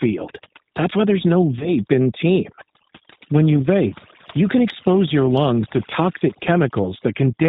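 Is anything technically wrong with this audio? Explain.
Yes, there are three problems. Throughout, overdone noise removal has crushed any band near the noise estimate, so the background sits near silent with twinkly specks.

The whole clip also carries the G.729 codec, plainly audible. Its filter-and-pulse rebuild, typical of an 8 kbit/s voice line, leaves speech rough and synthetic with nothing above 4 kHz.

Right after "why there's no", from about 1.59 to 1.70 s, there's VoIP packet loss concealed by the speech codec. The gap points to about 20 ms of lost audio. The decoder stretched its last frame into a fading buzzy tone or coloured noise, and the voice stays weak while it recovers.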